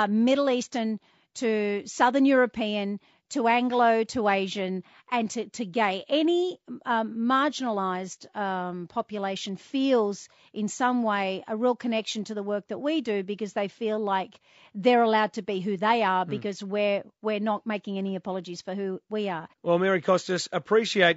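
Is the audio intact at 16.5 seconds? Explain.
No, at 16.5 s the speech is rough and grainy, likely from low-delay AAC compression throughout, fitting about 32 kbps; a spectrogram shows smeared harmonics, noise between them, and a thinned top band.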